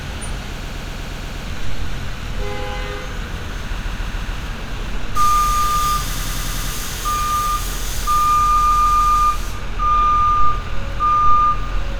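Runs of compressed frames were delivered more than once, so the decoder replays the same short block as a looping stutter that stretches the sound. These repeated frames occur at 0.61–1.45 s (a 120 ms block, seven extra plays), 3.78–4.36 s (144 ms, four), 6.13–6.71 s (96 ms, six) and 8.56–9.28 s (144 ms, five).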